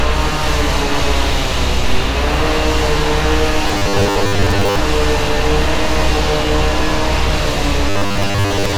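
A recording of sounds turns into robotic sound from repeated short buffers twice, from 3.68 to 4.79 s and from 7.90 s to the end at 8.77 s. Both stretches carry a rigid, metallic buzz at 100 Hz, which fits a 10 ms buffer being replayed. The likely cause is audio arriving too seldom, so roughly seven-tenths of the material is repeated rather than new. Unlike plain dropouts or a sweeping flanger, the buzz stays at a fixed rate while the sound's outline still roughly follows through.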